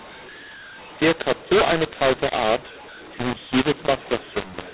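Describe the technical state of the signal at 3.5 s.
At 3.5 s the speech suffers from mu-law and A-law mixed up, which runs through the whole clip: 8 kHz G.711 audio encoded as mu-law is being decoded as A-law. Levels come out scrambled, so the voice sounds harsh and distorted, with quiet stretches lifted into audible noise.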